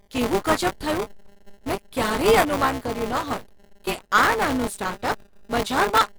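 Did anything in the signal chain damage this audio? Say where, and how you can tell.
Yes, at the driver or buffer stage: buffer tearing runs through the whole speech clip. A rattly, robotic buzz at 200 Hz rides on the speech and disappears in pauses, so it depends on the signal rather than being added noise. The program filling the ring buffer and the hardware draining it have drifted into overlap, so in every period of about 5 ms roughly 15% of the block is stale audio from about 20 ms earlier, spliced in with hard joins. On a spectrogram this shows as vertical striations every 5 ms and a comb of 200 Hz harmonics across voiced sections. The waveform shows step discontinuities at that regular spacing.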